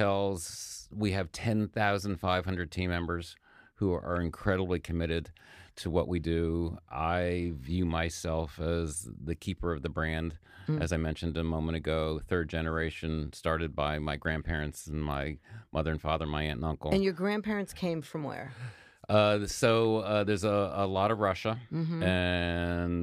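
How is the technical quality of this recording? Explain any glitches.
No glitches or technical faults can be heard here.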